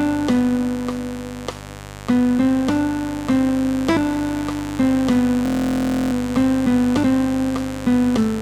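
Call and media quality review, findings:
Mains buzz, full length. Switching spikes from a dimmer, rectifier or unshielded cable coupling into the analogue path at 50 Hz, twice per mains cycle. Result: steady, raspy buzz with harmonics stacked into the kilohertz range, sitting roughly 15 dB under the programme throughout.

System hang loop, 5.46–6.13 s. Host or audio driver froze while the hardware kept replaying its ring buffer. The same 23.2 ms fragment repeats about 30 times, fitting a 1024-sample buffer, and is heard as a hard buzz at 43.1 Hz. Playback resumes with no audio missing.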